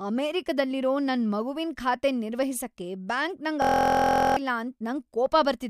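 A speech clip with a system hang loop. It starts at 3.62 s, just after "ಖಾತೆನ್ ನಿರ್ವಹಿಸಕ್ಕೆ ಬ್ಯಾಂಕ್ ನಂಗ್". Until 4.37 s, one 23.22 ms slice repeats exactly, over and over. At that length it sounds like a steady 43.1 Hz buzz. This fits a 1024-sample buffer. The system froze while the hardware kept replaying its buffer. About 0.7 s of the real audio is lost.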